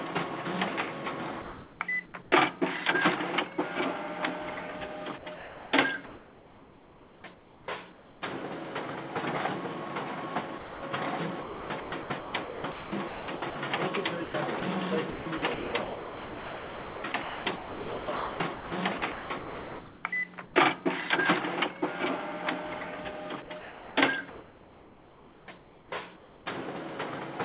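Comfort noise in place of the background, 1.42 to 2.32 s: the real background gives way to a steady, featureless hiss for about 0.56 s, likely because discontinuous transmission halted sending and the receiver synthesised filler noise. Sound dropped by the voice detector, 2.06 to 2.14 s: within that stretch, a brief fragment of sound vanishes under 80 ms of synthetic noise, likely because the detector misjudged quiet sound as background. The same sound dropped by the voice detector recurs at 10.58 to 10.82 s, where 240 ms of sound is lost to steady noise before the audio resumes. Sound chopped by the voice detector, 5.18 to 8.22 s: the detector likely toggled sending on and off repeatedly, so quiet portions and edges are replaced by comfort noise, about 2.3 s in total, leaving the sound choppy. The same sound chopped by the voice detector returns at 11.42 to 13.56 s (about 1.3 s replaced), at 14.24 to 20.54 s (about 3.9 s replaced, the longest stretch), and at 23.42 to 26.46 s (about 2.3 s replaced). 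Throughout, nothing is heard above 4 kHz, which fits a narrowband call codec such as G.711.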